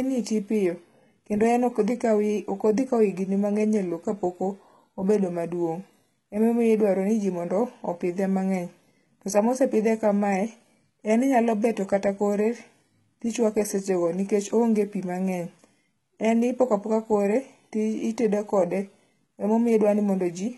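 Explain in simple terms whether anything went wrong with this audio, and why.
Heavy compression went wrong here, and it most likely comes from HE-AAC compression squeezing this speech clip very hard from start to finish. That kind of coding keeps only the lower part of the sound and invents the treble by copying lower sounds upward. The top is bright but fake, and nothing reaches above about 11.8 kHz. So s sounds come out gritty, lispy or metallic all the way through.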